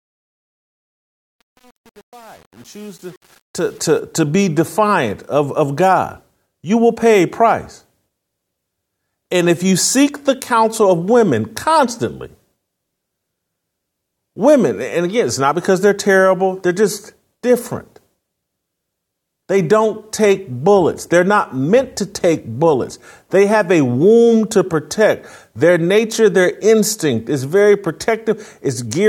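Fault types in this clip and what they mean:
truncation distortion on a fade: the undithered fade-in grits until 4.0 s, before "to be defiant of"; waveform shows square steps, spectrogram broadband hash.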